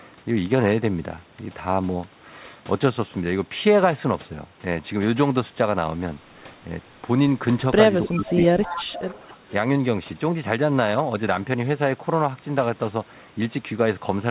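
From 8.06 to 8.42 s the echo canceller likely faced both sides talking at once and could not tell this talker from loudspeaker echo, so it turned everything down. This is speech suppressed in double talk: the speech dips by about 10 dB for roughly 0.4 s. Almost simultaneously, from 8.09 to 8.44 s, an echo leak appears. The far end's canceller likely failed to remove all of its microphone's pickup, so a copy of the speech returns about 0.30 s late, faint at about 20 dB below it. A louder stretch of the same echo follows from 8.62 to 9.29 s, now only about 15 dB down and lasting roughly two-thirds of a second. Within it, from 8.66 to 8.78 s, double-talk suppression briefly pulls the speech down by about 5 dB. A final dip of about 10 dB comes at 9.29 to 9.38 s, just as the echo ends. Throughout, the audio is band-limited to 4 kHz by the call codec, consistent with 64 kbps G.711 mu-law.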